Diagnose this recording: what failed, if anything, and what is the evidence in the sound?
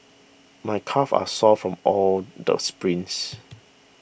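An electrical switching spike at 1.27 s sits on top of the speech as a sharp snap, lasting about 15 milliseconds and peaking at about -20 dBFS. The fault is in the analogue wiring stage. The cause is likely a nearby switch, motor or static discharge whose brief arc induced a transient into the audio line, adding a tight burst of energy to the speech rather than interrupting or replacing it.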